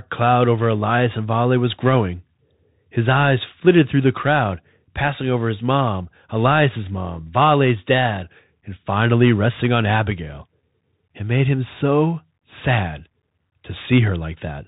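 From the start to the end of the speech, the sound carries the signature of a Bluetooth CVSD headset codec, which fits the 64 kbps narrowband link. Each sample is coded as a single up-or-down bit with an adapting step, and the damage is plainly audible. Nothing above 4 kHz survives, so the speech sounds boxed in. Sibilants come out scratchy, loud bright passages distort where the step cannot keep up, and a granular hiss sits under everything.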